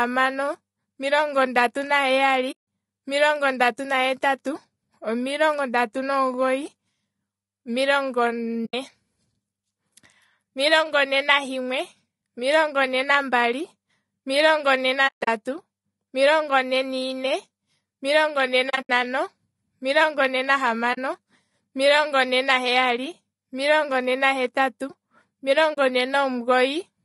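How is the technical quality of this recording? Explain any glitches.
The recording has clearly audible coding damage throughout, plus six short dropouts where the sound briefly vanishes.

Across the whole speech clip, the likely cause is low-delay AAC compression of the AAC-ELD kind. It codes about 500 frequency lines a frame with a low-delay window, and at a modest bitrate the encoder runs short of bits. The speech sounds rough and grainy, with noise filling the gaps between harmonics and a thin, somewhat synthetic top band. The degree of damage is consistent with roughly 32 kbps.

AAC frame loss with muting occurs at 2.51 to 2.60 s, 8.65 to 8.74 s, 15.07 to 15.28 s, 18.69 to 18.90 s, 20.93 to 20.99 s and 25.73 to 25.78 s. At each point, coded frames went missing and the decoder replaced them with silence. The overlapping windows taper the sound out and back in, so each gap has soft edges. 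The gaps range from about 40 ms to 180 ms, which fits runs of 20 ms frames. Two of the gaps are broken up rather than continuous. Near 15.1 s, 180 ms is lost over 200 ms, with the longest hole around 150 ms. Near 18.7 s, 140 ms goes over 200 ms, in pieces of about 70 ms or less, so that one sounds choppy rather than like a single dropout.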